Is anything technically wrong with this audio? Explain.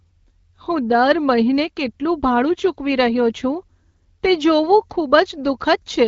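No, nothing is technically wrong with this audio.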